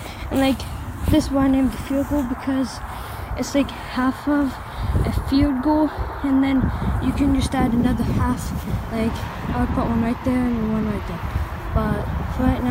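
No technical faults can be heard anywhere in the audio.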